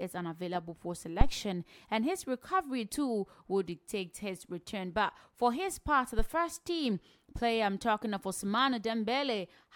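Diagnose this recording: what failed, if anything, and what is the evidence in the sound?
The failure is in the analogue input stage: a phantom power thump, heard twice in the speech. The first runs from 1.21 to 1.35 s and peaks at about -10 dBFS, dying away within 30 ms. The second, from 6.19 to 6.28 s, is weaker at about -17 dBFS and decays in 21 ms. Both are deep, dull thuds. A supply was switched on a live input. The voltage step passed through the coupling capacitors as a low-frequency pulse.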